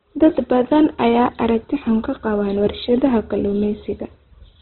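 Throughout, the speech sounds rough, grainy and narrow, likely from heavy Opus compression at a rate fitting about 12 kbps in music mode. Starved bands are noise-filled rather than emptied. A spectrogram shows a hard ceiling at 4.1 kHz and speckled texture below.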